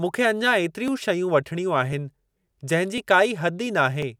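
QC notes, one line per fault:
0.88–4.02 s, clock drift buffer slips: after "मूंखे अञां", clicks recur every 1.05 s, likely mismatched device clocks dropping or repeating small sample blocks.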